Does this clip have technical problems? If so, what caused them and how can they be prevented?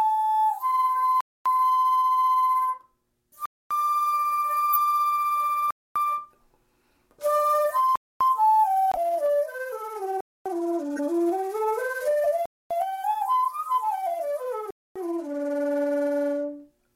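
Yes, three kinds of fault.

Gap between chunks: 250 ms silences at 1.21, 3.46, 5.71, 7.96, 10.21, 12.46 and 14.71 s, one after every 2-second stretch of sound. The chunks are joined with dead air between them, probably from padding or late playback starts. To prevent it, trim the padding and queue each chunk before the previous one ends.

Corrupt frame decoded: short chirpy blips at 4.73, 10.96 and 12.23 s, each lasting about 30 to 40 ms. Damaged compressed frames were played anyway, so energy lands at the wrong frequencies for two or three frames each time. To prevent it, add checksums so the decoder rejects bad frames and conceals them.

Corrupt frame muted: an abrupt 64 ms dropout from 8.92 to 8.98 s, which fits two frames being rejected and replaced with silence. The timing stays intact, so nothing after it shifts. To prevent it, protect the transport with error correction or retransmission, and use packet-loss concealment instead of plain silence.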